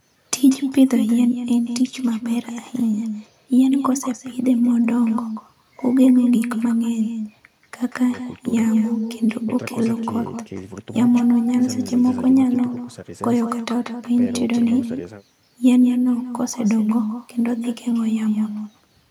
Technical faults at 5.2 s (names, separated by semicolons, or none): echo with no canceller